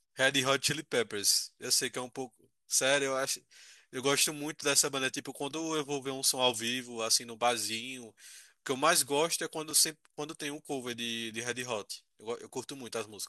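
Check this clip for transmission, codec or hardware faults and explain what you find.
One fault is present in the speech: a block of digital silence at 9.71 s. For about 2.35 ms the sound drops to silence and then resumes, with no fade on either side. Each hard edge is a step discontinuity in the waveform, and the two edges sit close enough to merge into a single tick. The gap is too short to be heard as a hole. Dropouts of this kind come from an output buffer that was not filled in time, or from a calculation that produced invalid values.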